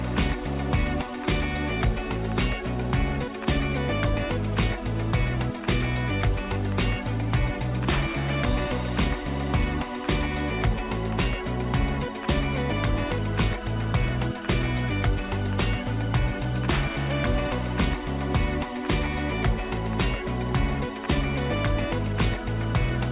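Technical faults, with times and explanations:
No technical faults with times and explanations are present in this clip.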